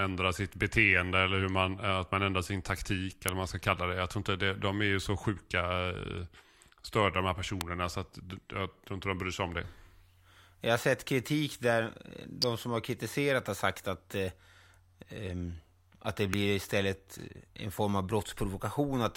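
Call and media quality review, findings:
Electrical switching spike in speech, four events. Sharp snaps at 3.28 s, 7.61 s, 12.42 s and 16.34 s. Each is very brief, sitting on top of the speech. Peaks reach around -10 dBFS, the 7.61 s event softer at around -15 dBFS. Likely a nearby switch, relay or static discharge arcing. The arc's short burst of energy couples into the audio line and adds a click the microphone never heard.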